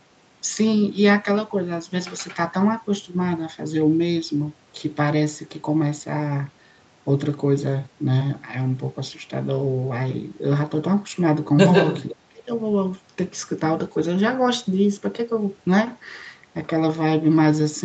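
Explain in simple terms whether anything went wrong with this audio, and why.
Between 11.73 and 12.15 seconds, the speech is followed by a second copy of itself arriving about 0.15 seconds late and nearly as loud as the original, so it sounds doubled and smeared. This is an echo leak. The likely cause is that the other person had the call on a loudspeaker, and their echo canceller failed to remove all of the speech their microphone picked up, so part of it was sent back down the line.

Right after, from 12.19 to 12.5 seconds, the voice sharply drops away for about a third of a second, as if pushed into the background. This is speech suppressed in double talk. It likely happened because both sides were sounding at once, and the echo canceller couldn't separate the real talker from the returning echo, so it turned everything down together.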